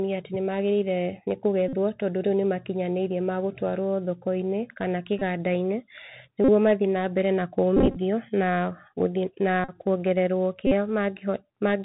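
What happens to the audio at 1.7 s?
A Bluetooth headset packet repeat runs from 1.68 to 1.75 s, just before "tondũ rĩu nĩmakinyanĩĩrĩe ma". Voice packets between headset and phone went missing, about 45 ms of audio, which fits a run of roughly a dozen packets. The chip filled each gap by decoding the previous packet's bits again. Because the same short fragment recurs every 3.75 ms, the gap becomes a steady, mechanical buzz near 267 Hz. Good packets then resume.

Under the buzz, the narrowband sound of the Bluetooth CVSD headset codec carries on. This one-bit delta coding at 64 kbps cuts everything above 4 kHz, adds a granular hiss, and roughens sibilants, so the repeated fragment carries the same dull, gritty tone.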